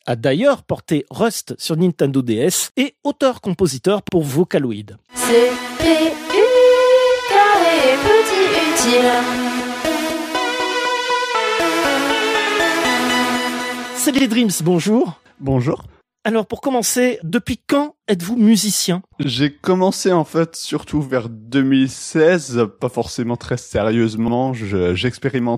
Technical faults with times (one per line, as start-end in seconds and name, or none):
4.09-4.14 overlapping chunks
9.14-9.18 overlapping chunks
14.18-14.23 overlapping chunks
19.23-19.28 overlapping chunks
24.28-24.33 overlapping chunks